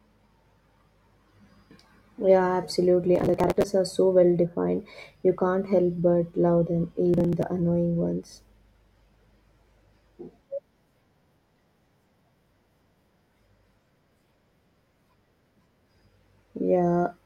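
The processor fell behind its audio deadlines, skipping short buffers of around 10 ms over and over. That processor overload crackle tears through the speech from 3.16 to 3.64 s, then returns as a shorter gritty burst from 7.14 to 7.43 s.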